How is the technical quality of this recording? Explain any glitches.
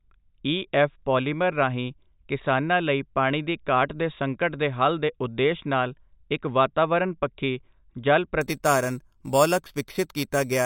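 One fault affects the final stretch of the speech. Imaging from sample-and-hold upsampling runs from 8.41 s to the end: unfiltered sample repetition from 8 kHz to 44.1 kHz mirrors the spectrum into 4 to 8 kHz at about -14 dB, heard as a metallic fizz following the speech.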